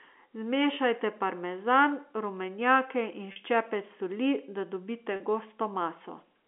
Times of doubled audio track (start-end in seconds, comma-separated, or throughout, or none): none